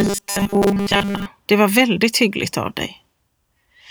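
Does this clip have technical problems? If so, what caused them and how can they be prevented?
Yes. From 0.01 to 1.26 s the speech turns into robotic sound from repeated short buffers: a rigid, metallic buzz fixed at 200 Hz that still loosely tracks the syllables. The likely cause is audio arriving too slowly, so the same 5 ms chunk is replayed in place of most of the real signal. Unlike clipping distortion, the buzz pitch stays constant regardless of loudness. Larger buffers and a steadier processing load prevent it.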